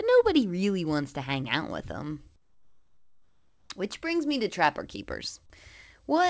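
A gap in transmission, likely discontinuous transmission with comfort noise standing in for the background, runs from 2.36 to 3.70 s. For those 1.34 s the real background, sitting about 41 dB below the loudest sound, is replaced by a steady, featureless hiss about 10 dB quieter, until the sound resumes. The whole clip comes through a call path with nothing above 8 kHz, which points to a wideband codec such as G.722 at 64 kbps.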